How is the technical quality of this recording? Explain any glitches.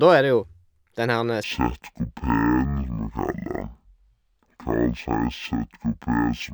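The recording has one serious fault that runs from 1.44 s to the end of the clip.

Stereo read as mono, from 1.44 s, right after "den herre": the left and right samples, stored alternately, are being read one after another as a single channel. Each moment of sound therefore takes twice as long to play, so the speech runs at half speed and drops an octave, 12 semitones, into a slow, deep drawl. A fainter mirrored copy of the sound also appears in the upper half of the spectrum.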